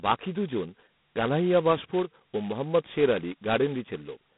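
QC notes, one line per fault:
Throughout, G.726 ADPCM: speech carries a heavy, rasping hiss that rises and falls with its level, consistent with the 16 kbit/s mode, where only two bits per sample code the prediction error. The band runs 150 Hz to 3.6 kHz, nothing above 3.9 kHz.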